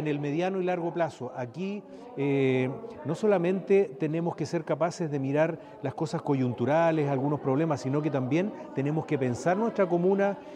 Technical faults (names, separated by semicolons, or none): none